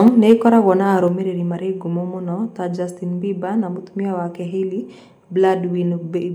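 The speech clip opens with microphone overload from 0.06 to 0.33 s. Peaks run about 2 dB past the converter's limit, and around 2 percent of samples are flattened. The loudest sounds gain a harsh, crackly edge, likely from input gain set too high. The microphone volume is also stepped down three times. At 0.08 s the level drops by about 3 dB, at 1.08 s by about 4 dB, and at 6.18 s by about 2 dB. Each drop is sudden and lowers voice and background together. This is likely the call software cutting the device's input gain after detecting clipping.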